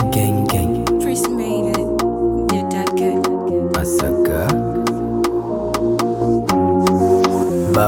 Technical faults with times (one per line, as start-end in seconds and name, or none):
none